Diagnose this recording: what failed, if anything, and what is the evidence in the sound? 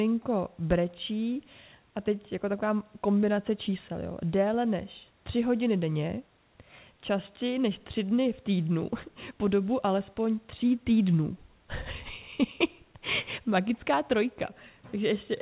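Nothing failed; no stage shows a fault.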